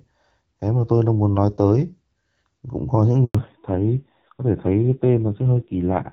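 Right after "có những", at 3.25 s, there's a handover gap: the speech cuts out for about 100 ms while the call jumps networks, and whatever was said there is lost. From 3.35 s to the end, the call falls back to narrowband. Before the switch the HD Voice wideband codec sounds clear with only light coding damage, but now nothing above 4 kHz is left, and the speech turns dull and rough, which fits a low-rate AMR narrowband mode around 5.9 kbit/s.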